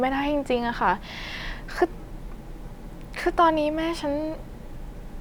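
Speech, with no technical fault to be heard anywhere in the recording. Nothing in it points to a problem in the chain that captured or reproduced it.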